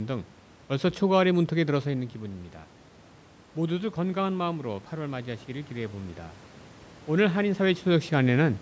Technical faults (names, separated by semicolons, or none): automatic gain rising